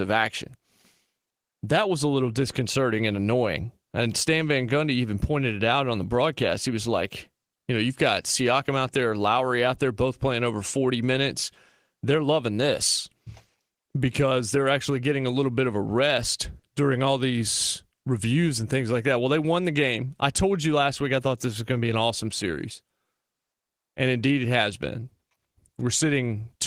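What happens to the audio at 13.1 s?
Just after "loving this", a short concealed packet loss occurs from 13.09 to 13.13 s. About 20 ms of audio never arrived in time, so the receiver extrapolated the preceding sound and blended back, leaving a brief smear. On a spectrogram, the preceding spectrum stretches unnaturally flat, then cross-fades.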